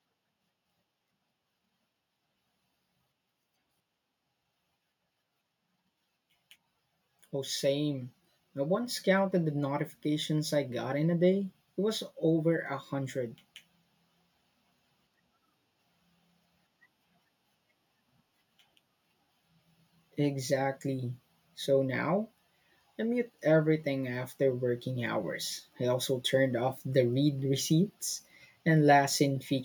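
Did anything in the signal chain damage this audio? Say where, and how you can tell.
Yes. Automatic gain rising in the call processing stage: from 7.32 to 10.89 s, just before "in a day", the level climbs by about 6 dB as the AGC boosts a quiet input. Speech and background noise swell together, showing a gradual ramp in the waveform envelope and a uniform rise in energy across the spectrogram.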